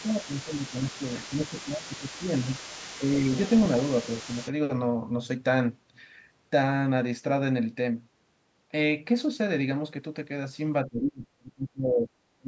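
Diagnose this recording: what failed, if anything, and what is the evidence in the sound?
The speech dips in level in five places: 0.00–1.01 s, 1.29–2.48 s and 2.98–3.11 s, where the drops are shallow (a few dB up to about 10 dB), then 10.86–12.12 s and 12.38–12.47 s, where it nearly vanishes, falling by about 30–35 dB. This is speech suppressed in double talk, at the call-processing stage. The likely cause is that the echo canceller, facing both talkers at once, could not separate the near voice from loudspeaker echo and attenuated everything.

Underneath the talker from 0.00 to 4.52 s sits a second, fainter voice, roughly 20 dB below the speech, audible as a background layer. This is the other side's voice leaking through, also at the call-processing stage. The far end was played on the device's loudspeaker and picked up again by the microphone, and the echo canceller likely left a residual of it in the outgoing signal during that stretch of overlapping talk.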